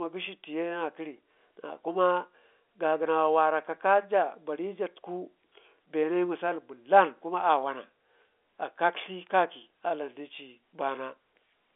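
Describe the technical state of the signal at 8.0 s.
At 8.0 s the audio is intact, with the speech carried cleanly through the G.711 telephone coding and its band closing off below about 3.8 kHz as that channel should.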